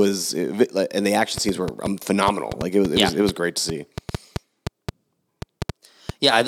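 A speech recording carries a train of clicks from 1.38 s to 6.10 s: roughly twenty similar pulses at an irregular 4.45 per second, peaking about 15 dB above the speech and ticking through pauses, likely interference from nearby equipment or a faulty connection or power supply.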